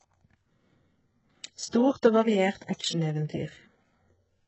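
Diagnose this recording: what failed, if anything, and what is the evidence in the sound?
The codec stage failed, most likely through HE-AAC compression at a very low bitrate. The speech has nothing above 8 kHz. The treble that remains is a rebuilt copy of lower bands, not the original. Harmonics do not line up across the crossover. Sibilants come out gritty and metallic throughout the clip. The damage is heavy, and it fits a rate near 8 kbps. At that rate the band replication has very little to shape the copied treble.

There is pre-echo at three onsets. It runs from 1.70 to 1.73 s, at 2.02 s, and from 2.57 to 2.61 s. Each attack has a short hiss just before it, spreading about 30 ms, 13 ms and 41 ms respectively. The cause is the transform block. Quantisation noise sized for the loud attack spreads across the whole block, filling the quiet gap before it. The onsets therefore sound softened and smeared.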